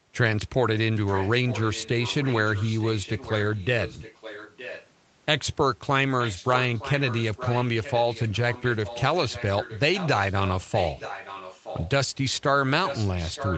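A speech recording with an echo leak, likely from a far end playing the call on a loudspeaker whose echo canceller let part of the returning speech back into the send path. A faint copy of the talker trails the original by about 0.92 s from 1.06 to 4.9 s, at roughly 15 dB below the speech, then louder, around 10 dB down, from 6.2 to 9.03 s, 9.29 to 11.9 s and 12.85 s to the end. The audio carries nothing above 8 kHz after the call's processing and codec.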